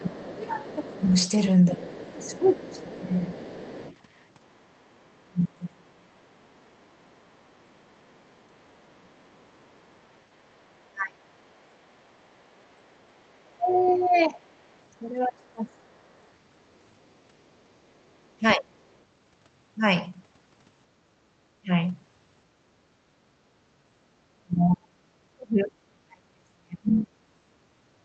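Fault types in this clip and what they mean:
Other side's voice leaking through: a faint second voice, around 25 dB below the talker, runs from 0 to 19.0 s, likely residual loudspeaker echo the canceller missed.
Speech suppressed in double talk: the talker's level drops, by up to about 40 dB, for roughly 10 s in total between 0 and 27.4 s, likely from overlapping talk.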